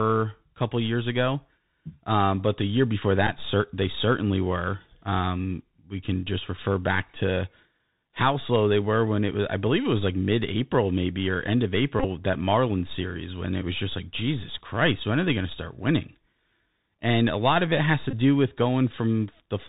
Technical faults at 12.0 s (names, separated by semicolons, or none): Bluetooth CVSD headset codec; Bluetooth headset packet repeated